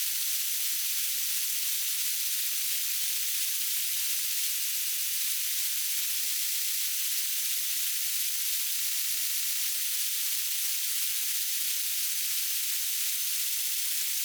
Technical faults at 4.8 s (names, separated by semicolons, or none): repeated frames